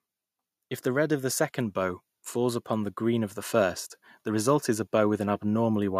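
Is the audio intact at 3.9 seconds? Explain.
No. At 3.9 seconds the level is still climbing. Both the speech and the background noise swell together, rising by about 8 dB in total between 0.82 and 5.95 seconds. This is automatic gain rising: the gain control judged the input too quiet and kept raising it gradually.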